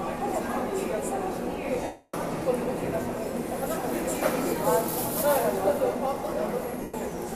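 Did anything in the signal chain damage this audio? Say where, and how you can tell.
Yes. From 1.83 to 2.14 s and from 6.82 to 6.94 s the sound smears into grainy noise, the longer stretch fading. That is lost LE Audio frames over Bluetooth: the LC3 decoder filled 300 ms and 120 ms gaps by repeating the last spectrum with random signs.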